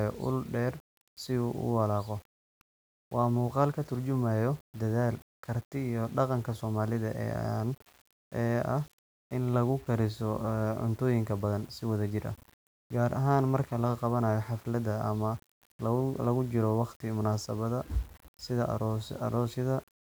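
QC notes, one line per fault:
Throughout, low bit depth without dither: the speech carries a grainy, rasping distortion that tracks each syllable, roughening quiet passages and sputtering on the softest tails, sitting roughly 30 dB below the signal; likely a 7-bit rounding with no dither, so the error follows the waveform.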